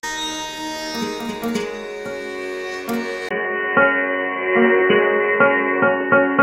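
At 3.29 s the music drops out for about 20 ms, then returns dull and boxy until the end, with nothing above 3 kHz, a level shift of roughly 5 dB and a new noise floor some 30 dB down. The likely cause is an input switched to a poorer device.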